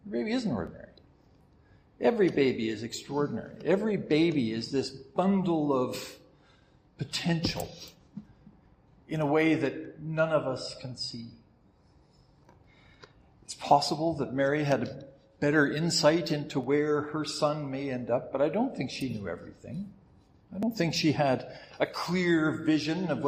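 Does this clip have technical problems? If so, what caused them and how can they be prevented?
Yes: overlap between stream segments causes tiny skips at 0.67, 4.66, 12.64, 16.64 and 20.63 s, spaced on a 4-second segment grid. Overlapping timestamps made the player trim 5 to 16 milliseconds of audio, so the waveform jumps rather than pausing in silence like a dropout. Writing segment timestamps so each segment begins exactly where the previous one ends prevents it.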